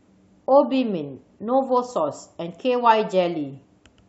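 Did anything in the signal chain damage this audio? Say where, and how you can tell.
No, nothing in the signal chain stood out as damaging on listening to this speech recording.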